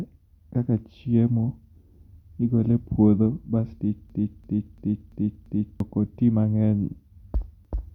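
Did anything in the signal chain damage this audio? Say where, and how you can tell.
Yes, at the driver or buffer stage: a system hang loop from 4.10 to 5.80 s, where a 341 ms slice of speech repeats five times at 2.93 Hz, a machine-gun stutter that fits a 16384-sample ring buffer replayed while the system froze. About a second and a half of audio is lost. A waveform shows identical repeating blocks, and a spectrogram shows copied columns.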